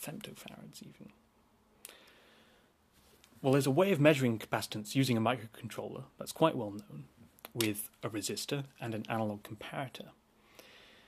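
There are no technical faults to describe at any point in the clip.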